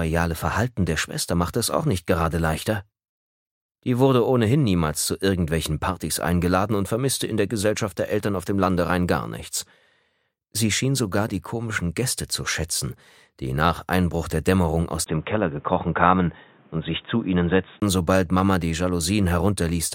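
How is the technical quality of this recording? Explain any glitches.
The recording holds up until a stretch from 15.04 to 17.82 s, where the input likely switched to a poorer device. There's a brief gap of about 20 ms at the switch, then everything above 3.8 kHz disappears and the sound turns dull and boxy. The level stays about the same, but a faint new background noise appears, well under the signal. At 17.82 s the original fuller sound returns.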